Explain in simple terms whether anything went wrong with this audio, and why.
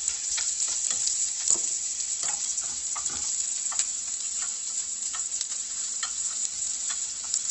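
Something did go wrong, from start to finish. The sound comes across grainy and rough, with a noisy fizz where clean detail should be, and it seems dull because nothing above about 8.1 kHz is left. The likely cause is heavy Opus compression in its music mode: squeezed into very little data, it kept the broad outline of the sound but filled in the finer detail with noise and cut off the top end.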